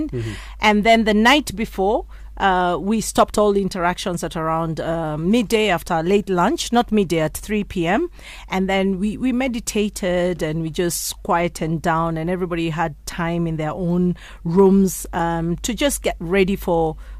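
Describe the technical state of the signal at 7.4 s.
At 7.4 s the speech signal is intact, with no dropout, distortion or other fault audible at that moment.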